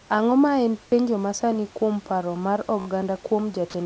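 A speech recording carried over a call path with no content above 8 kHz, consistent with G.722, and with room noise sitting about 30 dB below the voice. At 2.80 s, just after "masani kuom paro mar", there is a repeated buffer: a 16 ms slice plays four more times back to back, up to 2.86 s, with a hard join at each repeat. This fits a 256-sample buffer being replayed because fresh audio had not arrived in time. Because the slice is so short, the repeats fuse into a brief buzzy stutter rather than a distinct echo. No speech is skipped; the timeline is simply stretched. From 3.70 to 3.74 s, the speech gives way to 40 ms of steady low-level noise, and about 30 ms of sound is lost before the signal resumes. This is likely sound dropped by the voice detector: the sender treated the sound as background, stopped transmitting, and the receiver filled the gap with comfort noise until detection picked up again.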